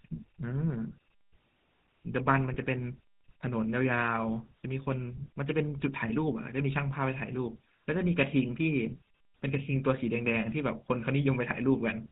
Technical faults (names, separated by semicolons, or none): GSM full-rate codec; lost GSM frames